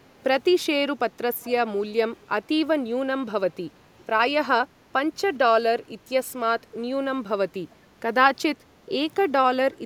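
From 1.42 to 1.5 s, a faint delayed copy of the speech slips through, trailing the original by about 0.4 s and sitting roughly 20 dB below it, so it comes across as a brief ghostly repeat rather than a second voice. This is an echo leak, likely from the far end playing the call over a loudspeaker while its echo canceller failed to fully remove what the microphone picked up, sending that remnant back into the call.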